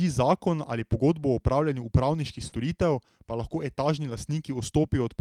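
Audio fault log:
2.47–2.59 s, burst of packet loss: right after "pogodbo o opravljanju upravniških" a run of audio goes missing. The receiver stretches the last sound for about 46 ms while fading it, roughly 40 ms of speech is skipped, and the speech picks up slightly further along.
2.52–2.54 s and 4.09–4.15 s, lost packet rebuilt from error correction: one 20 ms packet inside that burst and two packets (40 ms) after "pa lahko" are played from the low-bitrate backup copies carried in the following packets. No gap, just a briefly rougher, noisier patch.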